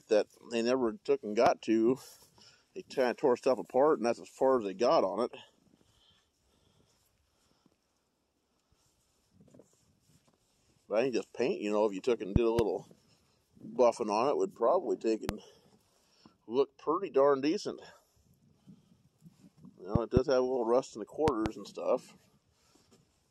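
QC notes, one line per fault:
1.46–1.49 s, loud pop: a single sharp pulse roughly 20 dB above the sound, which continues underneath, so it is not a dropout; likely a voltage spike from a switch or static.
12.36–12.61 s, loud pop: two thumps in quick succession, peaking roughly 20 dB over the audio, likely from a plug or contact making and breaking; the sound carries on beneath.
15.29–15.31 s, loud pop: one brief, heavy thump roughly 20 dB above the signal, fuller than a tiny digital click because the downstream circuits shape it; likely a static discharge.
19.95–20.19 s, loud pop: a pair of pops somewhat softer than the rest, roughly 15 dB above the sound; likely an intermittent electrical contact, with the audio unbroken underneath.
21.28–21.48 s, loud pop: another double thump roughly 20 dB over the signal, spread across a fifth of a second; likely a driver glitch or loose connection pulsing the line twice.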